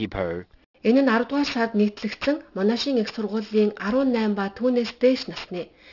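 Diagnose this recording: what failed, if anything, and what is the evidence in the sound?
A sample-rate conversion, consistent with a 12 kHz target, skipped anti-alias filtering. Aliasing throughout folds content above 6 kHz back down as fairly strong, gritty, metallic tones.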